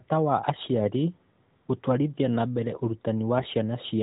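At 3.38 to 3.46 s, AMR bit errors hit a few frames: flipped low-protection bits misplace excitation pulses, so the speech turns briefly hoarse and gargly while pitch and level hold, unlike a dropout.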